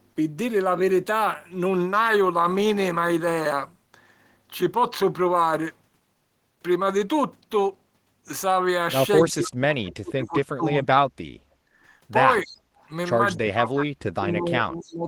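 The clip is speech, and its trouble comes from an echo canceller during double talk. With both ends talking, the canceller likely mistook the near talker for loudspeaker echo and pulled the speech down, causing speech suppressed in double talk. The voice sinks by around 35 dB from 9.23 to 10.37 s, by around 25 dB from 10.54 to 11.0 s, briefly at 12.44 to 12.48 s, and again by around 35 dB from 13.36 s to the end. While the far side's sound was playing, the canceller also clamped the microphone, so the background is gated by the echo canceller. The room tone drops by about 12 dB from 11.51 to 11.71 s, then recovers. An echo leak also occurs: the canceller likely failed to remove all of the loudspeaker pickup, so a delayed copy of the voice comes back. It trails the original by 262 ms and sits very low, roughly 25 to 40 dB under the speech, in scraps at 12.4 to 12.57 s, 12.77 to 12.88 s and 14.84 to 14.93 s.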